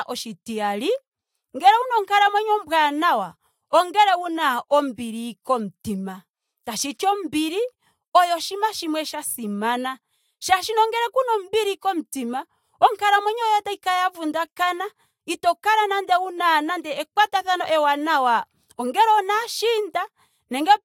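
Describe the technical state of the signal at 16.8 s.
At 16.8 s the signal is intact, with no audible technical fault.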